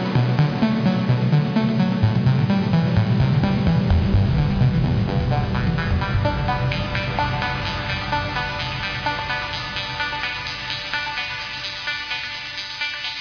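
Nothing technical goes wrong anywhere in this recording of sounds, so there's no fault to point out here.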